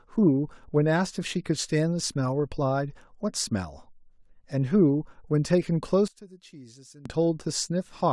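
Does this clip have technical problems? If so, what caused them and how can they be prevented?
Yes. From 6.08 to 7.06 s, one channel inverted, likely from reversed polarity, so summing to mono cancels the centred speech, leaving a faint remnant about 22 dB quieter. Checking each channel's polarity and monitoring in mono before export prevents this.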